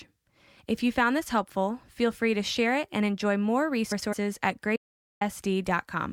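Speech recording with two faults. Just after "it and enjoy more", two neighbouring blocks of about 104.5 ms arrived swapped and were decoded in that order (frames out of order), so 3.91 to 4.14 s flutters. The input was likely lost from 4.76 to 5.21 s, with silence written instead, an audio dropout to silence that cuts about 0.45 s to dead silence.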